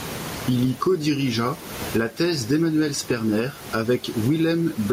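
Gain pumping runs through the whole speech recording. The gain pulls down on each loud sound, with the level swinging by around 20 dB, so loud and soft parts end up closer in level and the sound is squashed. The likely cause is input gain set far too high, with a fast limiter clamping each peak. The room noise sits about 29 dB below the speech. On a waveform the peaks look flattened and even, while a spectrogram shows the noise floor brightening between phrases and darkening under them.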